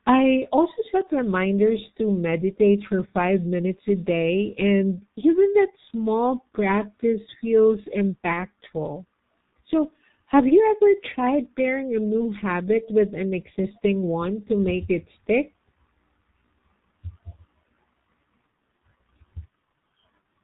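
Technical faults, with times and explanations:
Throughout: G.723.1 codec. The speech is muffled with nothing above 4 kHz, hoarse, and consonants are smeared. Its 30 ms frames and slowly updated voice model point to a G.723.1 stream around 6.3 kbit/s. Unlike plain low-pass filtering, the voice itself sounds rough.
8.33 to 8.45 s: VoIP packet loss concealed by the speech codec. The voice is briefly stretched and fades rather than cutting to silence, which fits one lost 30 ms frame. The decoder repeated its last pitch and filter, and recovery weakness lasts beyond the gap.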